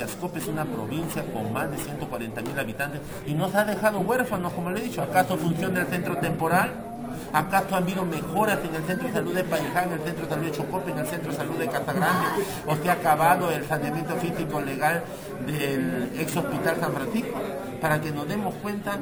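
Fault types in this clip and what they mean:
Imaging from sample-and-hold upsampling: the rate was raised without a smoothing filter, each sample simply repeated, which fits a step from about 22 kHz up to 44.1 kHz. Mirror copies of the spectrum therefore fold in above the old band, the lowest filling roughly 11.03 to 22.05 kHz at about 22 dB below the signal. Throughout the clip this adds a bright metallic fizz that rises and falls with the sound and moves opposite to its pitch.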